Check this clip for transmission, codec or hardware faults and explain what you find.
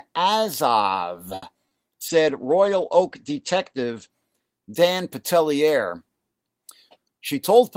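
Four kinds of transmission fault appear in this speech, all clustered around brief network trouble and its aftermath.

A short stall from a late packet at 1.35 to 1.44 s holds the sound for about 70 ms until the packet arrives, then resumes with nothing lost.

Short concealed packet loss at 1.54 to 1.57 s and 1.69 to 1.74 s drops about 20 ms each time. Unlike the stall, audio is actually missing, so it smears or wobbles.

A call bitrate drop from 32 to 13 kbps, 2.09 to 4.18 s, narrows bandwidth from 20 kHz to 8 kHz, giving muffled, watery speech rather than gaps.

A jitter buffer speed-up from 6.89 s to the end trims about 70 ms. The speech runs 6% faster at unchanged pitch, sounding hurried rather than damaged.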